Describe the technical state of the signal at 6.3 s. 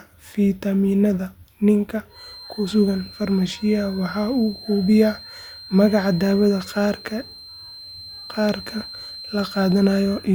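A feedback whistle runs under the speech at 6.3 s, from 2.07 s to the end: a thin 4.1 kHz tone some 20 dB down, swelling and fading slowly, likely from a speaker-to-microphone loop held just short of feedback. Unlike a runaway howl, it never builds.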